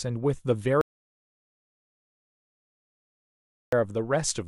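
From 0.81 to 3.73 s, an audio dropout to silence: the speech stops, likely from lost input, leaving a flatline waveform and a completely blank spectrogram.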